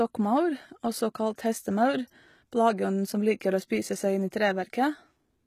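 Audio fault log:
throughout, HE-AAC compression: the treble sounds synthesized, with gritty, lispy s sounds, likely band replication copying lower bands upward at a low bitrate, something near 20 kbps.
3.40 s and 4.30 s, pre-echo: a short hiss creeps in just ahead of two sharp attacks, softening them, because block-wide codec noise spills into the quiet moment before.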